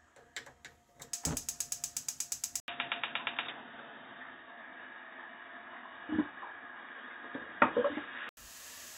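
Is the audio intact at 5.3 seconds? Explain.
No. At 5.3 seconds the audio sits inside a stretch from 2.6 to 8.37 s where it has lost its top end. Nothing passes above 3.8 kHz, so the sound turns dull and boxy. The level shifts by roughly 5 dB, and a new noise floor sits about 40 dB under the signal. An 80 ms silence marks the change at 2.6 s. The likely cause is an input switched to a poorer device with narrower bandwidth.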